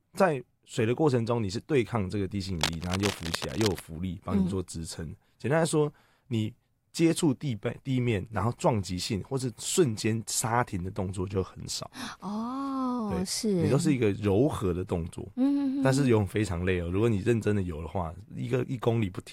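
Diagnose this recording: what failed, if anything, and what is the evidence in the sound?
Cable scratch noise sits in the analogue wiring stage. From 2.55 to 3.82 s a dense, irregular crackle and rustle runs over the speech, nearly as loud as the speech itself, roughly 5 dB below it. The bursts are uneven and unpitched, with no tonal hum or dropout. The likely cause is a worn cable or connector being moved, so that its contact resistance jumps about rapidly and injects noise directly into the signal path for just over a second.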